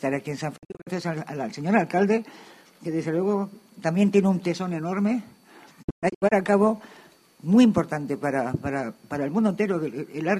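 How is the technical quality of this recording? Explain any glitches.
The recording has two digital broadcast dropouts. From 0.56 to 0.89 s, and again from 5.81 to 6.33 s, the sound fades to silence within about 20 ms in several short holes. Each hole lasts up to 48 ms in the first event and up to 120 ms in the second. The receiver muted while corrupt or missing frames arrived, so that audio is gone.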